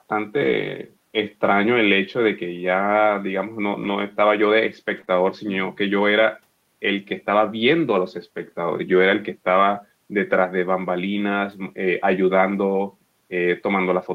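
Three brief rough, grainy patches occur in this speech: from 0.43 to 0.49 s, from 3.83 to 3.89 s, and from 4.97 to 4.99 s. They have no gap or dropout, just a moment of coarser, noisier sound. This is a lost packet rebuilt from error correction. The first two each replace 40 ms of audio, which fits two lost 20 ms packets. The third replaces 20 ms, suggesting one. The decoder played the low-bitrate copies carried in the following packets.

Directly afterwards, from 5.01 to 5.05 s and again from 5.05 to 5.09 s, the sound smears and wobbles briefly, as if the preceding moment were being stretched. This is short concealed packet loss. Two consecutive 20 ms stretches arrived too late or not at all, and no backup copy existed. The receiver extrapolated the last sound to cover about 18 ms and then 17 ms, and blended into each real segment over the remainder.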